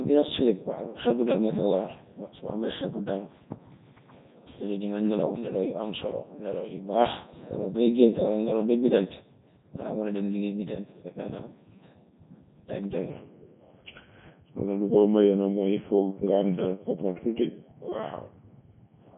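From the start, the whole speech clip passes through the Codec 2 vocoder, with heavy damage. Only pitch, voicing, energy and a spectral envelope survive, rebuilt from sine waves, so the voice is robotic and buzzy, in Codec 2's 3.2 kbit/s mode.

From 13.10 s to the end, the section plays at the wrong speed: 0.893 times normal, so the voice drops about two semitones and slows at once. Speed and pitch shift together, likely because that stretch was played back against the wrong clock.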